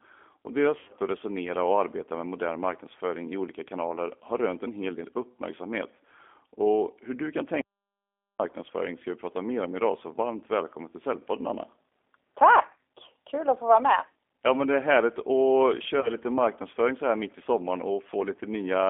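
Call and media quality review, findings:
G.729 codec, throughout: speech confined to roughly 250 Hz to 3.5 kHz, plainly rough and synthetic. Points to G.729A at 8 kbit/s, rebuilding each 10 ms frame from a vocal-tract filter, pitch predictor and a few pulses.

VoIP packet loss concealed by the speech codec, 0.79 to 0.94 s: about 90 ms missing across 100 ms, longest gap 80 ms. Decoder extends last pitch and filter into a fading buzzy tone or coloured noise; voice stays weak until frames rebuild.

VoIP packet loss concealed by the speech codec, 16.01 to 16.13 s: shorter, about 30 ms lost, fitting three 10 ms frames. Brief smear with gain dipping, then slow recovery as the predictor refills.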